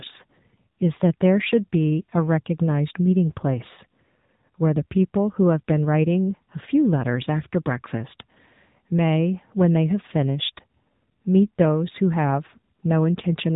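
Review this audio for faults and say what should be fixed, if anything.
Throughout the whole clip, the speech sounds thin, buzzy and synthetic, with nothing above 3.8 kHz. This is the AMR narrowband mobile codec: 8 kHz sampling and a pulse-driven vocal-tract model, with damage that points to a low rate near 8 kbps. To prevent it, capture or transfer the recording over a wideband path rather than a narrowband mobile call.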